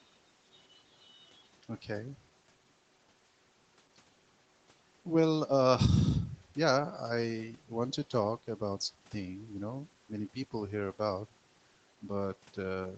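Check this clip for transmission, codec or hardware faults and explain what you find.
No transmission, codec or hardware faults can be heard in the speech. The sound stops at 8 kHz and carries the usual coding texture of a call path, which fits Opus at a modest bitrate around 20 kbps.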